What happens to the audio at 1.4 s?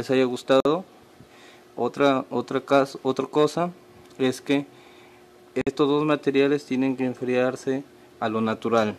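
Nothing goes wrong at 1.4 s; the audio plays through that moment intact, with no dropout, click or distortion.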